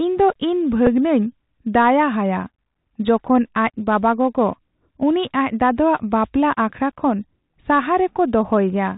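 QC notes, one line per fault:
throughout: Bluetooth CVSD headset codec, plainly audible. Nothing gets past 4 kHz, so the speech sounds boxy, with scratchy s sounds and a grainy hiss, which fits 64 kbit/s CVSD.
0.86 s: Bluetooth headset packet repeated. About 7.5 ms went missing, likely a couple of lost packets, and the chip replayed the previous one, leaving a brief buzzy tick.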